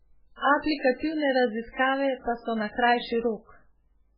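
MP3 compression damage runs throughout the speech, from start to finish. Nothing survives above 5.2 kHz, and the heavy watery, swirling texture and smeared attacks point to a starved encoder, likely MP3 at a very low bitrate near 8 kbps, zeroing weak frequency lines frame by frame.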